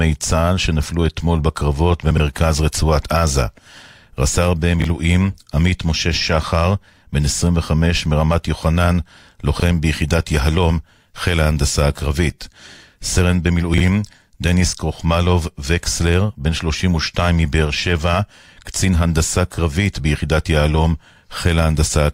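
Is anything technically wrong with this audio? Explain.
Yes. There are four brief jumbled moments in the speech, caused by chunks out of order. They occur at 2.11 to 2.20 s, between "שנפלו אתמול בקרבות" and "רצועת עזה"; at 4.80 to 4.84 s; at 9.56 to 9.62 s, between "מרמת יוחנן" and "ביחידת יהלום חיל ההנדסה"; and at 13.74 to 13.80 s, right after "חיל ההנדסה הקרבית סרן". Each one sounds like a tiny stutter or scramble. The audio travels in blocks of about 21 ms, and one block arrived or was written late, landing three, one, two and two blocks behind its proper place. Nothing is missing, but the shuffled order creates three abrupt, mismatched joins in each spot.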